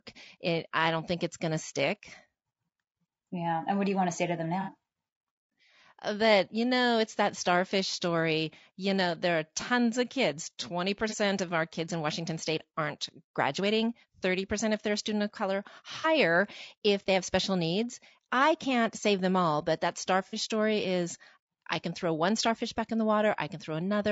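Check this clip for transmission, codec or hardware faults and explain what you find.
Yes, there are two faults: codec coarseness across the whole recording, plus four brief dropouts patched by concealment.

Low-delay AAC compression: the speech sounds rough and grainy throughout, with noise filling the gaps between harmonics, likely from AAC-ELD at a low bitrate around 32 kbps. A spectrogram shows smeared harmonics and a thin, patchy top band.

AAC frame loss with concealment: at 4.61–4.71 s, 11.09–11.14 s, 16.01–16.06 s and 20.27–20.35 s, the decoder filled lost audio, about 30–60 ms each, from the last good spectrum. Each patch sounds smeared and phasey. On a spectrogram they appear as blurred, noisy vertical strips.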